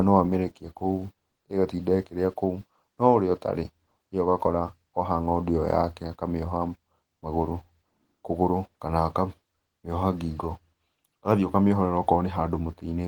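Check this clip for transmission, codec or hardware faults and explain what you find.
One codec fault runs through the whole clip. Opus voice compression, throughout: hybrid mode codes speech below 8 kHz with SILK and a CELT layer above, at a rate fitting about 16 kbps, leaving plainly audible hoarse, slightly robotic coarseness despite fullband extension.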